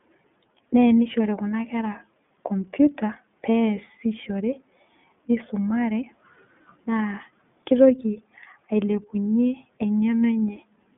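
The speech has passed through the iLBC codec, likely in its 30 ms frame mode, so nothing above 3.8 kHz survives and the voice sounds band-limited, rough and audibly synthetic throughout.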